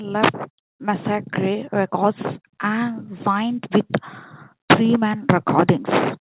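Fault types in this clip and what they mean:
Nothing here counts as a fault: the speech has come over a call path with nothing above 4 kHz, which fits G.711 mu-law coding at 64 kbps, and that's simply how that codec carries sound.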